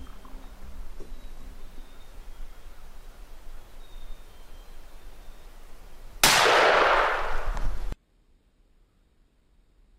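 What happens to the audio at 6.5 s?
At 6.46 s the audio abruptly slows by about 5.8% and drops roughly a semitone in pitch (about 104 cents), holding that detuned state until 8.04 s, when it returns to normal speed. That's a drift correction step, likely from clock-matching software changing the playback rate in a single jump to rebalance its buffer. Because speed and pitch move together, it sounds like a sudden sag in the tape. Real corrections of this kind are a tiny fraction of a percent, so this one is gross.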